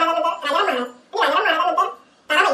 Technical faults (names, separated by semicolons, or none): audio read two samples at a time (double speed)